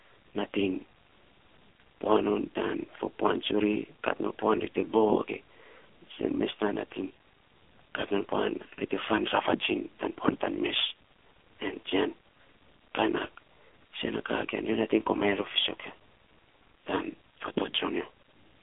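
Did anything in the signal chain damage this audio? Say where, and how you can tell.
Yes. The damage is at the codec stage, where the speech went through the AMR narrowband mobile codec for the whole clip. Nothing above 3.6 kHz survives, and the band sits between roughly 250 Hz and 3.5 kHz. The heavy buzzy, synthetic texture points to a low AMR-NB mode near 5.9 kbps. With so few bits, the vocal-tract model and its sparse pulses per subframe cannot follow the voice closely, so it comes out coarse and artificial.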